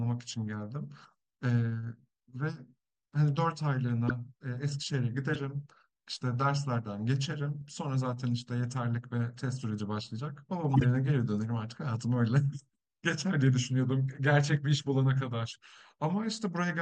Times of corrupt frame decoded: 4.08-4.11, 5.33-5.36, 7.61-7.72, 15.53-15.56

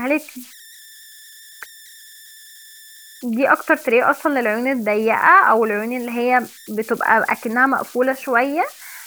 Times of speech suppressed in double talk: none

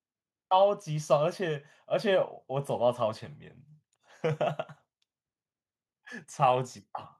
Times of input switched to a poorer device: none

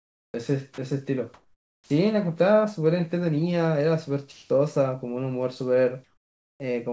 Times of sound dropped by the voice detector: 0.74-0.78

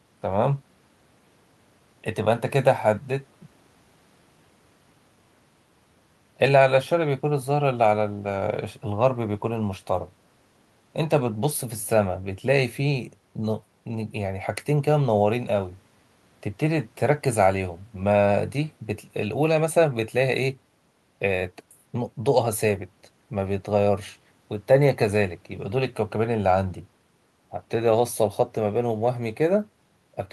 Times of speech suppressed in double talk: none

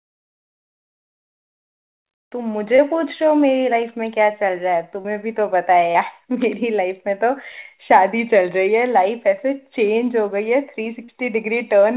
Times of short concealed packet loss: 2.76-2.80, 5.00-5.06, 5.92-5.96, 11.04-11.10

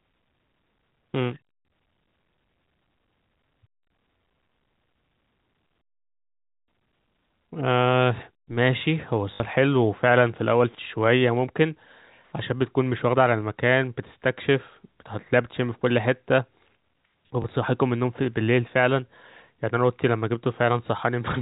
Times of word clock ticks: none

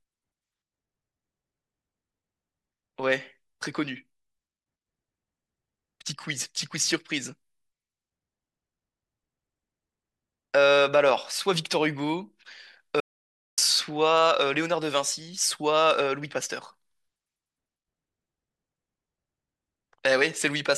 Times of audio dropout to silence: 13.00-13.58

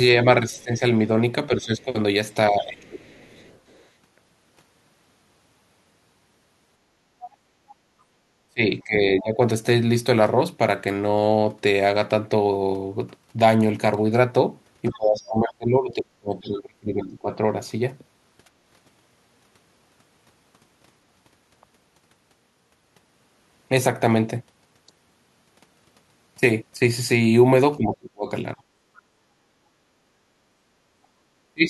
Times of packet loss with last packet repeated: none

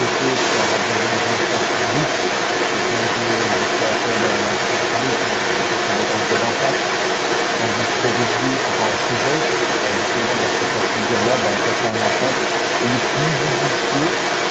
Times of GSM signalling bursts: none

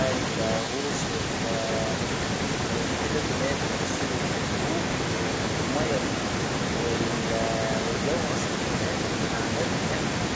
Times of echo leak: 0.04-10.36

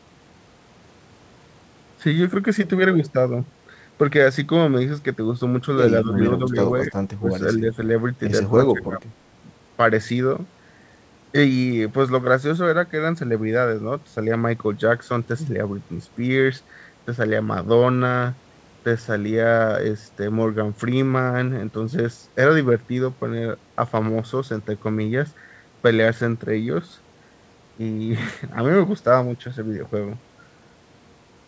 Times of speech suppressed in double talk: 6.04-7.30, 7.58-7.77, 8.50-9.03

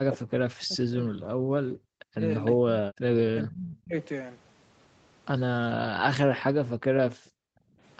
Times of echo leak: 2.45-2.52

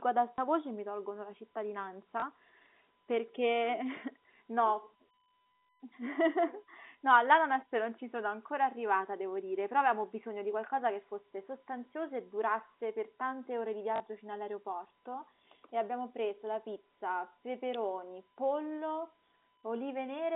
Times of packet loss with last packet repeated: 0.36-0.38, 2.20-2.22, 13.96-14.00, 16.88

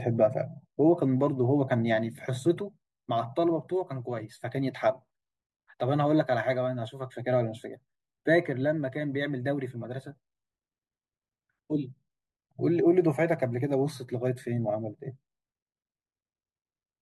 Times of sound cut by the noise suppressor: none

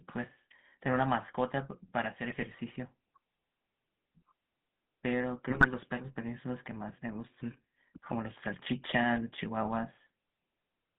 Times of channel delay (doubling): none

